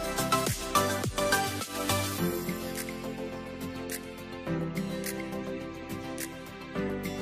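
Nothing goes wrong anywhere in this one; there's no dropout, glitch or distortion to point to at any moment.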